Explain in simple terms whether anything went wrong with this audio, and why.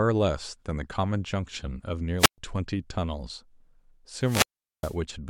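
Twice, the wireless microphone's radio signal weakened until the receiver shut its output off, a wireless microphone squelch dropout. Hiss rises, the speech vanishes into near silence, then returns: at 2.18 to 2.38 s with a 0.12 s gap, and at 4.2 to 4.97 s with a 0.41 s gap.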